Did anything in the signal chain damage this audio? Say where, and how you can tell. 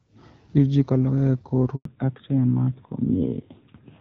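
Yes. At 1.75 s there's a handover gap: the sound cuts out for 100 ms, until 1.85 s, while the call hops networks and no frames arrive.

Right after, at 1.85 s, there's a fallback to narrowband. Everything above 4 kHz is gone until the end, so the codec dropped from HD Voice to narrowband.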